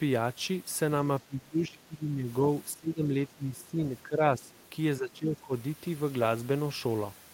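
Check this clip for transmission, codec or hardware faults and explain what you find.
Two echo-cancellation faults affect this speech clip, both occurring while the far end is talking.

Speech suppressed in double talk occurs at 1.22–2.28, 2.75–3.17, 3.36–3.81, 4.04–4.22, 4.38–4.51 and 4.98–5.53 s. The likely cause is an echo canceller that could not tell the near talker apart from loudspeaker echo and so attenuated everything. The talker's level sinks by roughly 20 dB in the first, longest stretch, around 15 dB in the middle ones, and about 10 dB in the two short ones near 4 s.

The other side's voice is leaking through at 4.52–4.68 s, immediately after the fifth dip. This is likely residual loudspeaker echo that the canceller failed to subtract from the microphone signal. It comes through as a brief, faint scrap of a second voice sitting about 35 dB below the talker's speech, so it is quiet.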